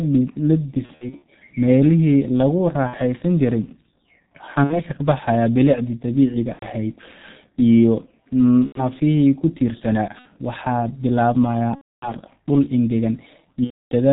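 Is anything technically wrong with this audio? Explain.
Yes. Throughout, the sound carries G.723.1 codec damage, heavy at what sounds like about 6.3 kbit/s. The codec's 30 ms frames and slowly updated voice model blur consonants and leave a muffled, hoarse tone. A spectrogram shows an empty band above 4 kHz.

VoIP packet loss concealed by the speech codec occurs at 0.86–1.24 s (scattered gaps), 2.87–2.96, 4.64–4.83, 6.53–6.67 s (just after "bilicdii dabiiciga"), 8.66–8.89, 10.19–10.28, 11.75–12.12 and 13.64–13.92 s. The decoder extends its last pitch and filter while lowering the gain, stretching the sound into a buzzy tone or coloured noise that fades. These show as smeared spectra and a shrinking waveform envelope.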